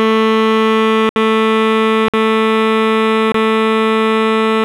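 Short holes break the music at 1.09–1.16 s, 2.08–2.14 s and 3.32–3.34 s: blocks of digital silence, likely from buffers not filled in time, the last fitting a 1024-sample buffer.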